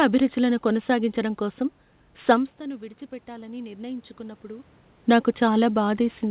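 From 2.58 s to 5.36 s the automatic gain control, finding the input about 16 dB quieter after the talker moved back, ramps its gain up by only about 4 dB. Voice and room noise swell together gradually, and the voice stays noticeably quieter than before.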